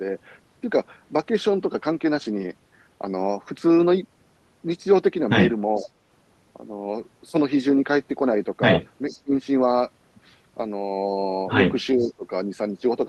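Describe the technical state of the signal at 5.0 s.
At 5.0 s the signal is intact, with no audible technical fault at that moment.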